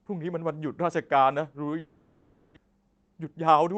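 From 1.79 to 2.58 s, a long network dropout, likely from lost packets, leaves about 0.6 s missing; concealment fills the gap with a fading, buzzy continuation. From 2.66 to 3.77 s, a jitter buffer speed-up trims short pitch-period pieces, roughly 150 ms in total, so the speech runs about 11% faster and sounds hurried at unchanged pitch.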